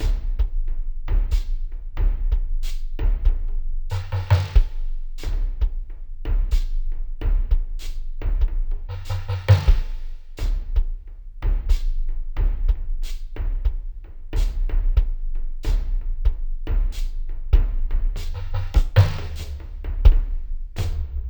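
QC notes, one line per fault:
Throughout: stereo read as mono. The interleaved left and right samples of this music are being taken as one continuous channel, so every pair of samples is stretched into two consecutive time steps. Playback therefore runs at 0.5x speed and sits a full octave (12 semitones) low, sounding sluggish and muddy. On a spectrogram the real content crowds into the lower half, with a fainter mirrored copy reflected into the upper half; the waveform looks stretched to double length.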